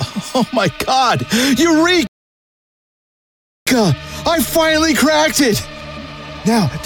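At 2.07 s the sound cuts out abruptly in mid-flow and stays silent until 3.67 s, a gap of about 1.6 s, before resuming. This is a playback stall. The output simply went dead for that stretch and then carried on. The likely cause is the player running out of buffered data, or its output thread being blocked, so nothing reached the device until it recovered and refilled.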